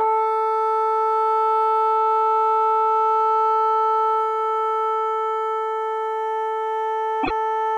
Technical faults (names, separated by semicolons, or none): damaged data in a compressed stream